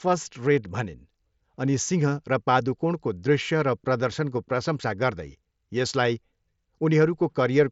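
Nothing goes wrong anywhere in this bit of speech: it just sounds like ordinary wideband Bluetooth headset audio carried over mSBC, with nothing that stands out as a fault.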